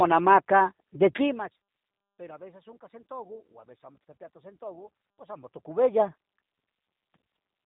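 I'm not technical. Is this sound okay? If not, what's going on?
No. The whole clip has been squeezed through the G.729 codec, a compact format used for internet phone calls that rebuilds each stretch of speech from a rough model of the voice. Everything above 3.8 kHz is gone, so it sounds muffled like a phone line. Unlike a simple telephone-style filter, which only dulls the sound, this codec also leaves the voice slightly rough and synthetic, and that is plainly audible throughout.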